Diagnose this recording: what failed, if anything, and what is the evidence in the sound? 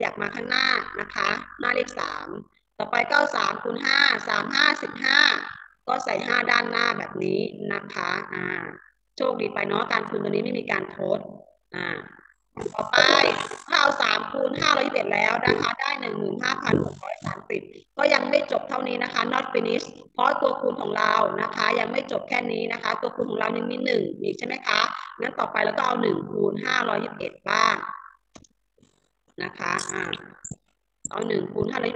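A hard, buzzing flutter runs through the whole recording: the level pumps up and down around 50 times a second, so every sustained sound takes on a rough, robotic tremolo. The dips are extremely deep, about 60 dB, so the signal nearly vanishes once per cycle. This is overlap-add ripple from a frame-based processing stage. The audio was windowed into frames and rebuilt with an overlap whose windows do not sum to constant gain, leaving a level modulation at the frame rate.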